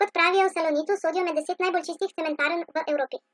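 From start to finish, the speech runs fast and high. This is a wrong sample rate fault. The samples were played back faster than they were captured, with no conversion between the rates. Speed and pitch therefore rise together, by a factor of 1.5. That is a pitch lift of about 7 semitones. It fits 16 kHz audio played at 24 kHz. Voices sound hurried and thin, with a chipmunk-like brightness.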